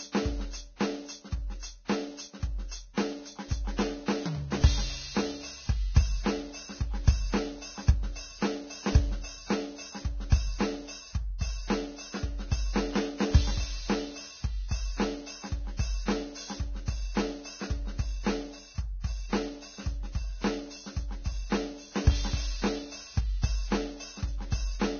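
Low-bitrate audio saved at a high bitrate runs through the whole music clip. Nothing sounds above about 6.5 kHz, so upper harmonics are missing and the top end is dull. That ceiling points to a very low-bitrate source, roughly 18 kbit/s, likely re-encoded as a high-bitrate MP3, around 256 kbit/s. The larger second encoding cannot restore the detail the first one discarded, so the damage remains.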